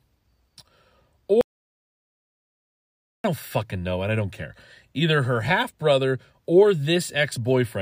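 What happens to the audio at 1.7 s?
An audio dropout to silence covers 1.7 s, running from 1.41 s to 3.24 s. The speech cuts off abruptly, and for about 1.83 s there is silence with no room tone or background hiss, before the speech resumes mid-flow. That dead-flat gap most likely means the input was lost, through a disconnected device, a failed link or an accidental mute, while the recording kept writing silence. Whatever was spoken in that stretch is gone.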